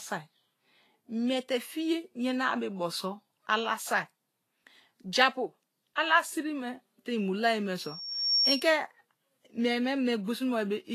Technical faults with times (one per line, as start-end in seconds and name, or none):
0.00-10.94 Vorbis compression
7.82-8.78 loudspeaker feedback squeal